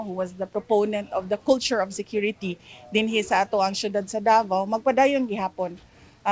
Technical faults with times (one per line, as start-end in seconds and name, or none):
none